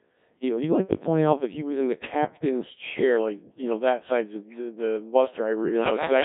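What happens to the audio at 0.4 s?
The speech passes through a Codec 2 vocoder, which fits roughly 1.3 kbit/s, for the whole clip. Resynthesised from sine waves, it sounds heavily robotic and buzzy, with nothing above 3.8 kHz.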